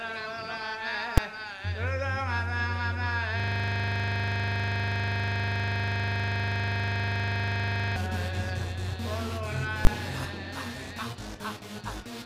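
Right at 1.18 s there's a single hard bang, and that's invalid numbers at full scale. Some calculation blew up into infinite or invalid values, and those got pinned to the maximum sample value for a 5 ms block. It's so short that it collapses into one sharp crack rather than two separate edges.

From 3.40 to 7.96 s you get a system hang loop. The machine or driver stalled while the audio hardware kept replaying the same 40 ms stretch of its ring buffer, well over a hundred times. Cycling at 25 Hz, it repeats the same snippet with no movement in it until the stall clears.

At 9.85 to 9.87 s the invalid-numbers fault hits again, this time holding an extreme value far beyond the audio's peaks for 20 ms. It's still very brief, so it lands as one loud pop.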